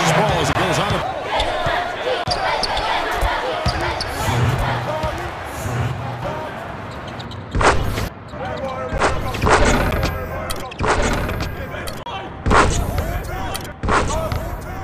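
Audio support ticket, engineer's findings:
Doubled audio track, whole clip: a second full-band copy trails by roughly 1.5 s at about 5 dB below the original, with no decay or room colour. Likely a second capture through a slower path or an edit holding two out-of-step copies.

Block of digital silence at 0.53–0.55 s, 2.24–2.26 s, 8.98 s, 9.91 s and 12.03–12.06 s: hard cuts to silence lasting 10 to 30 ms. Output buffer not filled in time, or samples zeroed after invalid values.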